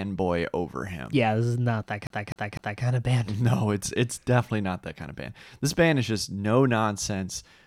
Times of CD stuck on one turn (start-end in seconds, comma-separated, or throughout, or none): 2.07-2.83